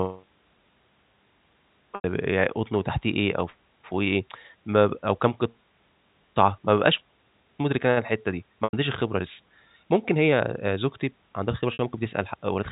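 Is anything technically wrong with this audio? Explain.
Yes. The speech has three brief gaps from packet loss with pitch repetition, at 1.95 to 2.04 s and 8.64 to 8.73 s (about 90 ms each) and 11.73 to 11.79 s (about 60 ms). The gaps fit two or three lost packets. At each gap the receiver loops the last pitch cycle it received and fades it out, so the sound briefly holds on a buzzy, sustained tone that thins out before the speech returns through a short cross-fade. A plain dropout would cut to silence or click instead, without that held, buzzy tail. The speech passes through G.711 telephone coding, which limits it to the narrow telephone band.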